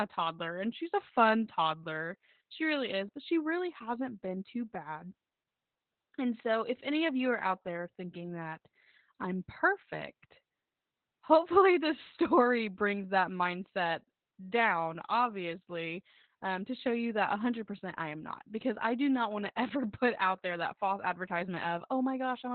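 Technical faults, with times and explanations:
Throughout, Opus voice compression: the speech has no content above about 4.3 kHz, leaving it muffled and telephone-like, with a hoarse, faintly robotic edge. This sound points to Opus running its SILK linear-prediction coder in narrowband mode at a very low rate, around 8 kbps. At that rate the encoder drops the upper band and codes the excitation coarsely, so breathy and voiced detail turns rough and buzzy.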